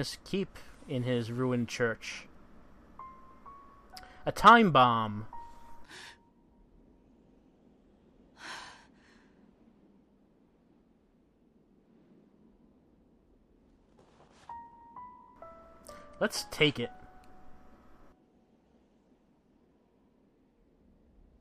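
Nothing in this one stands out as a technical fault; the audio just runs along without any glitches, dropouts or other trouble worth pointing to.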